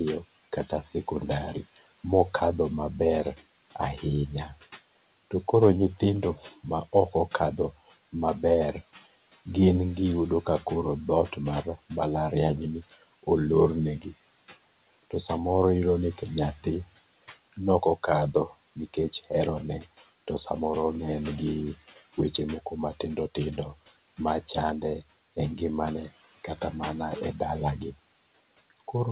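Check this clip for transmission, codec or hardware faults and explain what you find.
One fault runs through the whole clip: noise suppressor artifacts, heard over a narrowband call path with nothing above 4 kHz, which fits a telephone codec such as G.711.

Noise suppressor artifacts, throughout: the suppressor pulls steady room noise down by about 17 dB between phrases, so the background pumps up under speech. This differs from a noise gate, which cuts noise cleanly rather than leaving fluttering residue.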